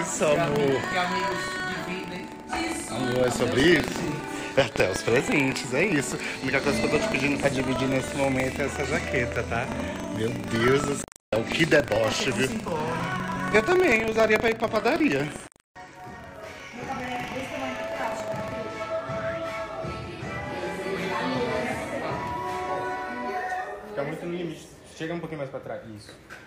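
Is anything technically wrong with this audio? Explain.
Yes. Buffer tearing runs from the start to 18.53 s. The writer and the reader of a ring buffer have slipped past each other. A small slice of each buffer, around 2 percent, holds audio roughly 150 ms old. Its hard joins produce a steady 25 Hz robotic rattle under the sound.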